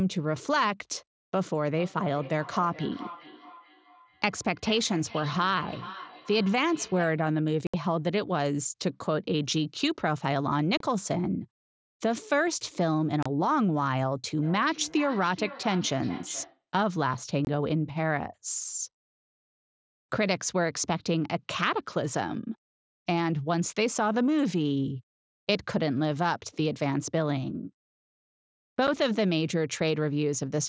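From 1.78 to 7.26 s there's feedback echo between two devices: a second device in the room is playing the call back, this microphone catches it again, and neither device's echo canceller touches the other's playback. You hear the speech come round again roughly every 400 ms, thinner and ringier each pass, peaking at about 16 dB under the voice. It returns from 14.43 to 16.64 s, a bit stronger at about 14 dB below.

Woven through that is unconcealed Bluetooth headset packet loss. Voice packets dropped between headset and phone with nothing patched in, so the speech has abrupt holes: 67.5 ms at 7.67 s, 30 ms at 10.77 s and again at 13.23 s, 22.5 ms at 17.45 s, and a tiny 7.5 ms one at 28.87 s. The mSBC headset link tops out at 8 kHz, and each gap cuts across the whole band at once.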